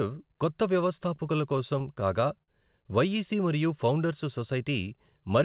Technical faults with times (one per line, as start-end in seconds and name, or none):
1.16-2.50 repeated stalls (stutter)